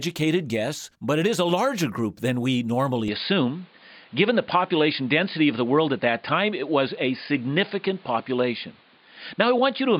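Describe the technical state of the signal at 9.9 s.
At 9.9 s the speech is still band-limited, with nothing above 4.9 kHz, as it has been since 3.08 s, and it carries a new noise floor about 35 dB down. This is likely an input switched to a poorer device, not a plain filter, since the tone and background change together with no gap or level jump.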